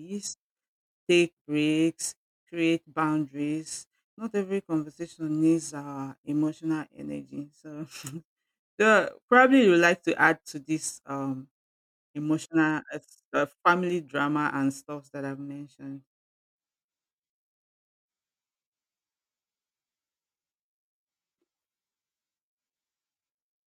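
No technical faults can be heard anywhere in this speech recording. There is nothing in the audio that calls for a timestamp or a note.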